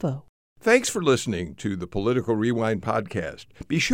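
No technical faults occur at any point in the recording.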